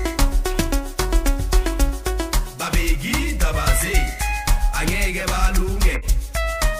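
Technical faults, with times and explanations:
5.94–6.05 s, corrupt frame decoded: a couple of damaged compressed frames got played anyway, so misread data throws out a brief chirpy burst peaking around -15 dBFS.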